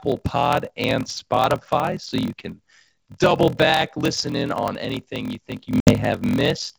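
Throughout the speech runs a steady buzz at 41.7 Hz. This is a padded block size mismatch. Each block is short and topped up with zeros, leaving a tiny gap every cycle. The speech plays at 0.889 times normal speed, at roughly normal pitch. This fits 1024-sample blocks read as about 1152.

From 5.80 to 5.94 s comes packet loss on an ADPCM call, heard through the G.722 wideband coding. A hard-edged hole of 60 ms, likely a few lost packets, cuts the sound. The decoder then has to catch up with the sender, so the speech returns distorted and settles shortly after.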